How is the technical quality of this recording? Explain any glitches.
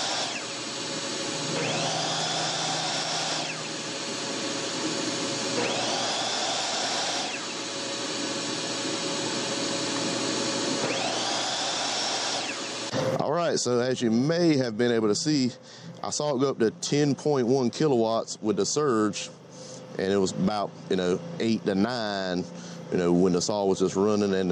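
No technical faults can be heard in this recording. There are no glitches to explain.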